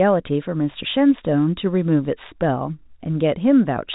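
Nothing here counts as a technical fault: the speech just has the narrow telephone-band sound of G.711 telephone coding, topping out around 4 kHz, which is simply how that format sounds.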